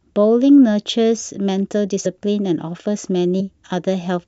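At 2.05 s and again at 3.39 s the speech jumps forward, with roughly 50 ms of sound missing each time. This is compressed frames skipped: the decoder has not played about two whole frames, which fits a 23.2 ms frame length. Unlike a dropout, there is no silent gap; the audio simply resumes later than it should.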